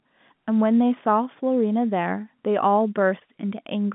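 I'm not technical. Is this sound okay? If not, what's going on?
Yes, this sound is okay; it's ordinary speech with the narrower, slightly muffled quality of a normal landline phone call.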